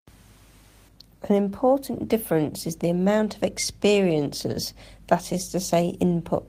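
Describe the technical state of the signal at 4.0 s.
At 4.0 s the speech signal is intact, with no audible fault at that moment.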